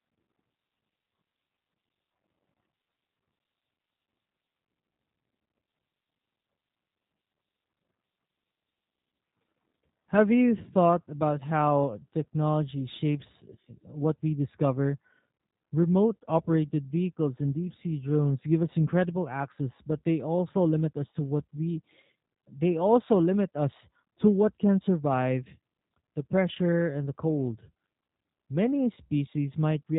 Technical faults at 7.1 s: G.729 codec

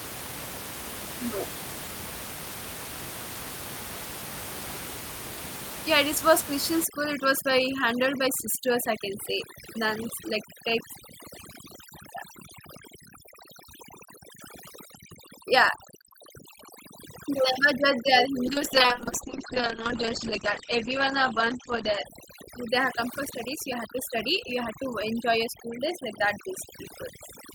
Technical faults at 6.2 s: none

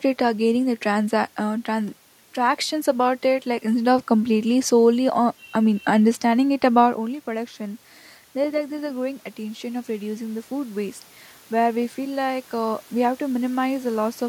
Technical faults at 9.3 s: automatic gain rising

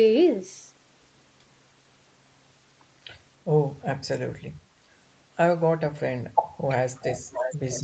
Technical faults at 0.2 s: none

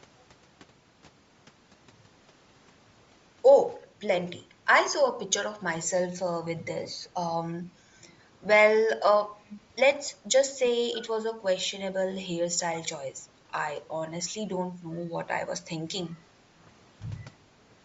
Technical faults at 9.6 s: Bluetooth LC3 compression; echo leak

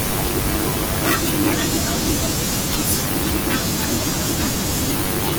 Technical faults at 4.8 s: none

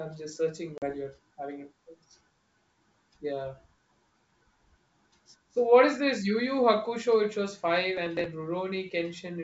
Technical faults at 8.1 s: processor overload crackle

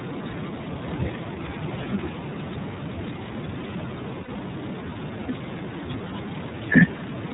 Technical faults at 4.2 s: iLBC codec; lost iLBC frames

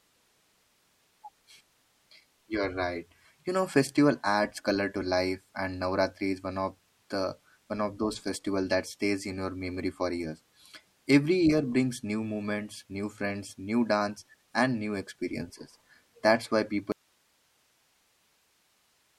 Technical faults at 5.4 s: none

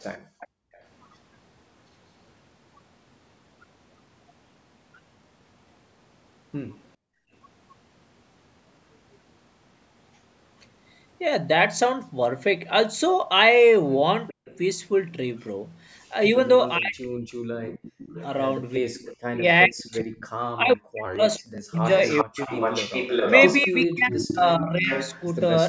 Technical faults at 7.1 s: background gated by the echo canceller

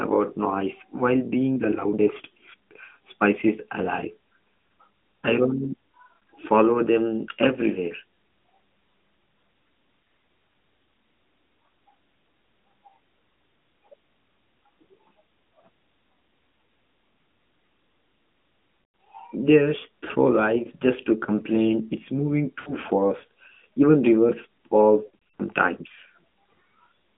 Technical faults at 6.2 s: AMR narrowband mobile codec; lost AMR speech frames

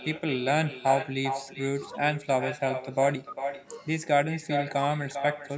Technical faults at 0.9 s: echo with no canceller; bit error spike

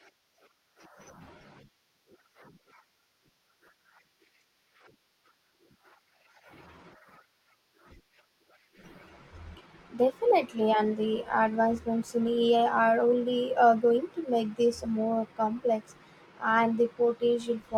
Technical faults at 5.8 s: none

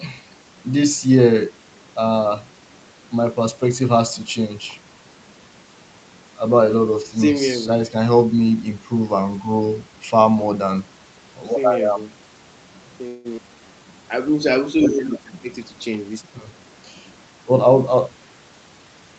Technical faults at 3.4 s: none

